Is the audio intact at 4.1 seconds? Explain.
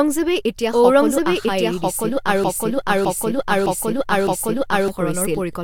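No. A broken-record loop runs from 2.44 to 4.88 s: a 0.61 s fragment repeats four times back to back, likely a stalled stream resending its last buffer. A doubled audio track is also present throughout, with an equally loud, dry copy trailing about a second behind, likely a second capture path.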